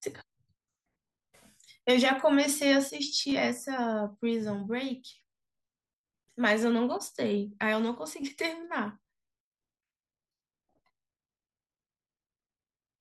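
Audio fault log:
3.30–3.32 s, repeated buffer: a brief buzzy stutter where a piece about 10.7 ms long plays twice more with hard joins, fitting a 512-sample buffer replayed when new audio arrived late; about 20 ms of sound is lost.
8.21 s, repeated buffer: a single sharp click as a 512-sample piece about 10.7 ms long repeats once, the last buffer replayed while awaiting new audio; roughly 10 ms goes missing.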